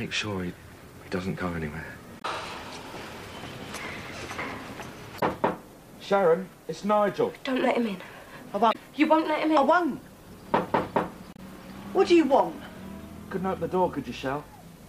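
At 2.18 to 2.25 s, 5.16 to 5.23 s, 8.69 to 8.76 s and 11.33 to 11.39 s, the audio breaks briefly, each break lasting about 70 ms. These are signs of damaged data in a compressed stream: the decoder meets corrupted frames, misreads or refuses them, and resynchronises at the next valid header.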